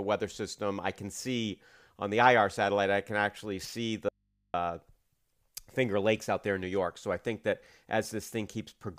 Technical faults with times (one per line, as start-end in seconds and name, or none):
4.09-4.54 audio dropout to a faint residue